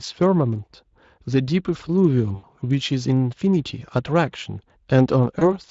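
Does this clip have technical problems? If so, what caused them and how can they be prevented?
Yes. At 2.35 to 2.45 s and again at 5.39 to 5.55 s the speech smears into a brief buzzy tone or coloured noise that fades before recovering. This is VoIP packet loss concealed by the speech codec, here the Speex codec: about 80 ms and 20 ms of audio went missing, and the decoder filled each gap by extending its last pitch and filter at falling gain. Because each frame builds on the previous one, the second event stays weak well past its short loss. Using a jitter buffer with forward error correction or redundant packets on a more stable network connection would prevent it.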